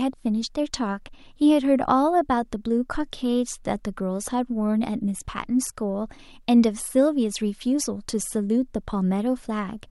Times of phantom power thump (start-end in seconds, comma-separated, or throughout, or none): 2.95-3.03